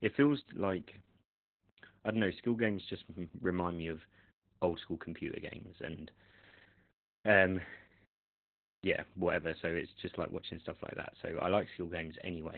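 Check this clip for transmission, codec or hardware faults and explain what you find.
One codec fault runs through the whole speech clip: Opus voice compression. Nothing is heard above 4.3 kHz, so the coder has dropped to narrowband SILK. Its excitation is coded coarsely, which fits a bitrate near 8 kbps. Speech sounds muffled, hoarse and slightly robotic.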